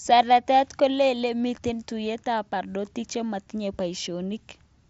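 Speech over a Bluetooth mSBC headset link, with no faults.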